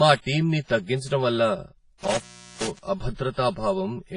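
From the start, channel delay (comb filtering) leaves the speech hollow and phasey: one channel trails by roughly 5 ms, carving fixed notches from about 100 Hz upward, unlike moving flanger sweeps. Throughout, heavy transform-codec damage washes and rings around syllables, with hiss breathing alongside and nothing above 10.4 kHz, likely WMA compression at a low bitrate around 24 kbps rather than simple low-pass filtering. Between 2.03 and 2.79 s an intermittent contact opens for about 0.39 s: the sound drops out with crackle at both edges and faint residual hiss, not a clean digital gap.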